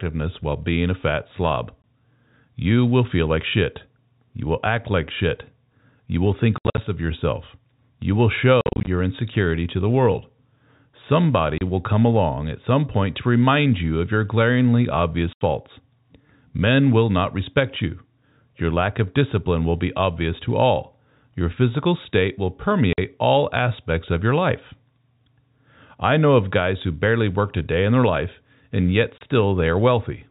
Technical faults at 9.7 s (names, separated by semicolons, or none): none